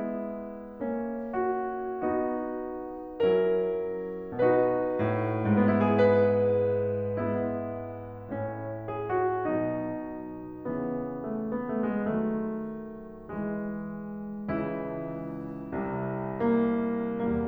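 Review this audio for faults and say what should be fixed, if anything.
No faults; nothing needs fixing.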